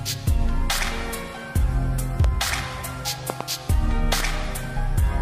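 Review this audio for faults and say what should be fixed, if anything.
Loud pops occur at 2.24–2.26 s (a single pop) and as double pops at 3.30–3.43 s and 4.13–4.22 s, each peaking about 15 dB above the sound. A sudden voltage step, likely from a plug, switch or static discharge, is shaped by downstream circuits into a thump. Unlike a dropout click, the sound continues unbroken underneath. Secure connectors, mute before switching, and control static near the equipment.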